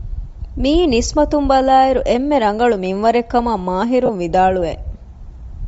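Throughout the speech there is a breathy, grainy edge on the upper frequencies, likely from Bluetooth LC3 compression. At a rate fitting about 32 kbps with 10 ms frames, much of the top spectrum is zeroed and filled with noise. Unlike the swirling, watery artefacts of MP3-style codecs, the damage sounds like a steady hiss-like graininess.

From 4.06 to 4.10 s, just after "އެންމެ ރަނގަޅު މިންވަރެއް ކަމަށް", lost LE Audio frames cause a brief noisy smear, which fits roughly three 10 ms frames concealed by replaying the last spectrum with scrambled signs. It is a blurred, hissy patch rather than a click or a hard silent gap.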